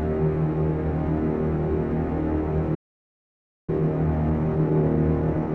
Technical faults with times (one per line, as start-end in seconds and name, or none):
2.74-3.69 playback stall
3.69-5.54 time-compressed catch-up